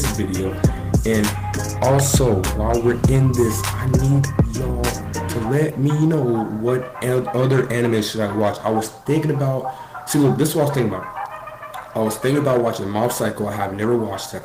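Nothing in this one trips up the ear, as there's no technical fault to point to anywhere along the way.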